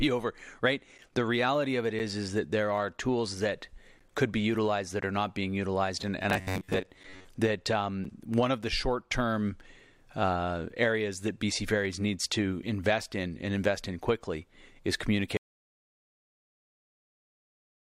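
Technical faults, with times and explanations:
1.99 s, 5.01 s (between "could be utilized that" and "are not being utilized") and 8.05 s: gap between stream segments. Each is a brief hole of hard-edged silence, about 8 ms, 13 ms and 8 ms long, falling on the 1-second segment boundaries where the timestamps of neighbouring segments fail to meet and the player pads the difference with nothing. Unlike a dropout, no speech goes missing. The sound resumes exactly where it stopped, just slightly late.
6.24–7.29 s, after "not being utilized and": robotic sound from repeated short buffers. The speech turns into a rigid metallic buzz locked at about 94 Hz while still loosely tracking the syllables. This is likely caused by audio arriving too seldom, so the software loops the last fragment of roughly 10.7 ms, and about half of the real audio is skipped in favour of repeats. The fixed pitch is what separates it from a clean gap.
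15.37 s to the end, after "invest in quickly is": audio dropout to silence. The speech cuts off mid-flow and the remainder is dead silence with no room tone, which points to a likely loss of the input signal while recording continued writing silence. Unlike the short segment gaps, this runs for over two seconds, never recovers, and whatever followed is gone.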